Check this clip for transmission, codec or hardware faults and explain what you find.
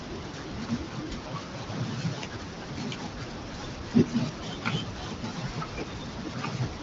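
No faults can be heard anywhere in this speech. It comes through an AMR wideband (HD Voice) codec with only light coding texture and nothing above about 7.5 kHz, which fits one of the higher modes near 15.85 kbit/s.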